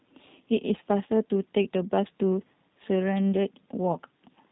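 From start to finish the speech has the G.729 codec's sound, and the damage is plainly audible. Nothing gets through above about 3.8 kHz, so it's muffled and boxy, and there's a rough, slightly synthetic edge because the codec doesn't keep the waveform. It rebuilds each 10 ms frame from a vocal tract filter, a pitch predictor and a few pulses. That thin rebuild fits an 8 kbit/s VoIP stream.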